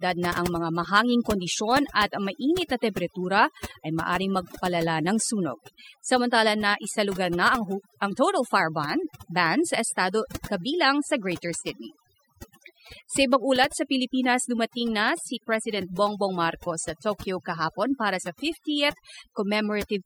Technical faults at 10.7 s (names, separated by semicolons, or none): overdone noise removal